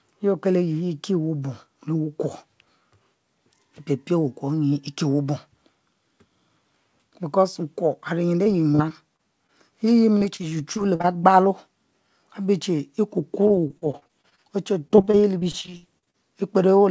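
Choppy, robotic speech breaks up from 8.44 to 9.50 s, 10.18 to 11.06 s, 13.48 to 14.40 s and 14.88 to 16.16 s. This is repeated packet loss: short holes, the longest 59 ms, are patched by stretching the preceding sound, covering up to about a quarter of the later stretches. Nothing is heard above 8 kHz, which fits a G.722 call codec at 64 kbps.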